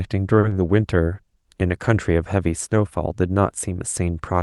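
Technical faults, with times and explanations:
0.39 to 0.45 s, short stall from a late packet. A packet arrived late and the jitter buffer ran dry. The receiver held the last sound for about 40 ms, then resumed from the same point. Nothing is lost, but the sound drags briefly and everything after runs 40 ms later.
0.49 to 0.53 s, short concealed packet loss. About 20 ms of audio never reached the decoder in time. The receiver filled the gap by extending the preceding sound, then blended back into real audio. The patch is heard as a short smear over the Opus call's band-limited sound, which stops near 12 kHz.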